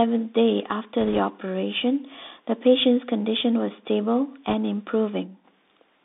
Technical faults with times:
0.00-6.04 Bluetooth CVSD headset codec
1.01-1.19 bit errors on a Bluetooth voice link
4.49-4.54 bit errors on a Bluetooth voice link
4.97-5.51 loudspeaker feedback squeal

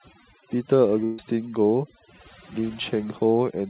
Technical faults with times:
0.00-3.70 overdone noise removal
1.04-1.20 burst of packet loss

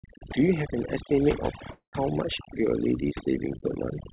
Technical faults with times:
0.00-4.12 overdone noise removal
1.72-1.95 call audio freeze

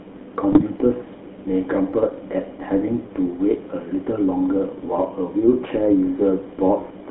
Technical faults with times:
0.00-7.11 GSM full-rate codec
0.52-0.63 GSM bit errors

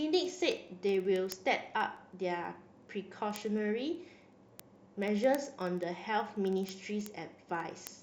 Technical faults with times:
0.14-7.98 word clock ticks

